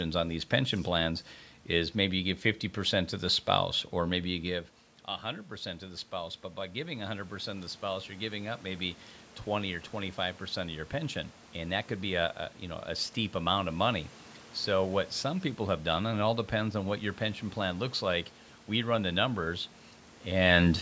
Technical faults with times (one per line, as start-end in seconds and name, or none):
5.22-8.97 automatic gain rising